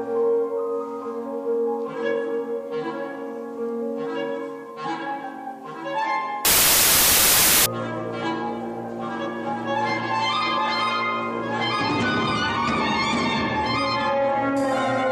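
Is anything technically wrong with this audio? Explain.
Yes. From 6.45 to 7.66 s the samples are built from the wrong bytes: the bytes of each sample are misassembled, so the rapidly changing low-order bits land in the most significant positions. The result is a burst of loud, harsh broadband noise replacing the signal for about 1.2 s.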